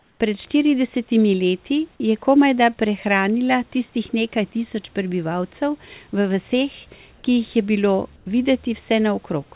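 Comfort noise in place of the background appears at 0.0–0.2 s, 7.16–7.24 s and 8.16–8.26 s, likely from discontinuous transmission filling pauses with synthetic noise. The room hiss turns smooth and featureless, about 4 dB quieter in the first and last gaps, but never falls silent as a dropout would.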